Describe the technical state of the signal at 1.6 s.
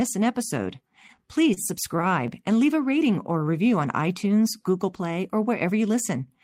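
At 1.6 s the speech is coming out of a short stall from a late packet, spanning 1.54 to 1.60 s. The jitter buffer ran dry, so the receiver stretched the last sound by 28 ms, then resumed where it left off with nothing lost, leaving a held sound with a slight buzz or dip and a 28 ms delay shift.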